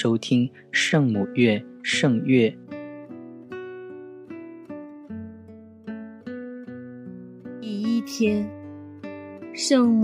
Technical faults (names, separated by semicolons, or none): none